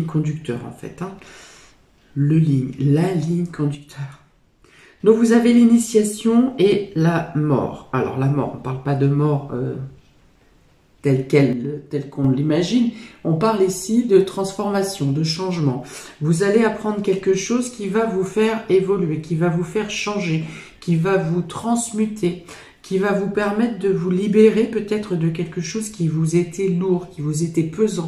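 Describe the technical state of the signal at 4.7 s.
From 3.75 to 5.00 s the sound falls abruptly by about 6 dB, likely one channel dropping out. Apart from that level drop, the sound is otherwise unchanged.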